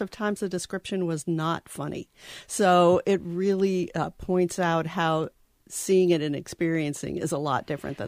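Nothing in the audio stood out as a technical problem on listening.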